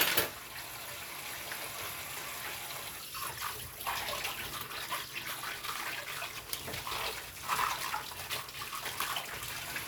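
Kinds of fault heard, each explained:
Sample clock jitter: an unsteady converter clock mistimes samples, adding roughness from 5.4 s, swelling on loud, bright sound and vanishing in silence, unlike steady hiss.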